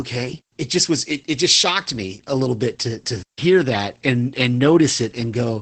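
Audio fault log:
throughout Opus voice compression. The speech is muffled, slightly hoarse and a little robotic, and the damage is plainly audible. Nothing is heard above about 8 kHz, which points to the wideband SILK mode of Opus. The linear-prediction coder keeps the broad vocal shape but codes the excitation coarsely. That coarse coding roughens the tone and smears detail. The degree of damage fits a low bitrate of around 12 kbps, coded in 20 ms frames.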